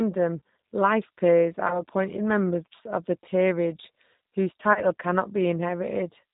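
Throughout, the speech sounds slightly rough and synthetic, with a dull top end and nothing above 4 kHz. This is the G.729 codec at work: an 8 kbit/s-class coder rebuilding each frame from a vocal tract filter, pitch predictor and a few pulses.

From 1.68 to 1.85 s, just after "life peers" and before "members of the peerage", the sound smears into a brief buzzy tone or coloured noise that fades. At 4.73 to 4.81 s, after "of the peerage whose", the same thing happens. This is VoIP packet loss concealed by the speech codec. About 20 ms and then 30 ms of audio went missing, and the decoder stretched its last pitch and filter with falling gain, leaving the sound weak for a moment after each gap.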